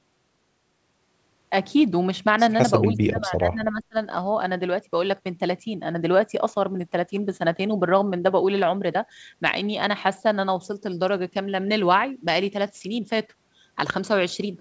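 Speech with a short speech dropout from 2.88 to 3.96 s: the talker's level falls by roughly 25 dB at its deepest and is affected for about a second. The likely cause is speech suppressed in double talk, where the echo canceller mistook overlapping speech for loudspeaker echo and attenuated it.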